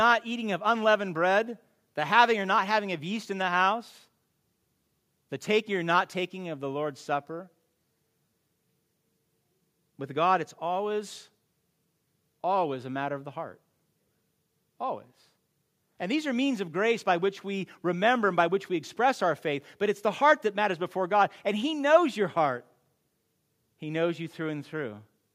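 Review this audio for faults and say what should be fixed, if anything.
Nothing stood out on listening, so there is nothing here that needs fixing.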